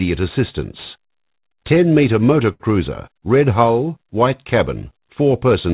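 At 2.53 s there's a short stall from a late packet, running to about 2.62 s. The next chunk of audio just wasn't there on time, so the jitter buffer ran dry and the receiver kept stretching the last bit of sound for 68 ms until it showed up. Nothing gets dropped; playback picks up right where it left off, just 68 ms later. You hear it as one sound hanging on a touch too long, with a slight buzz or dip, sitting inside the narrow, telephone-like band that cuts off at 4 kHz.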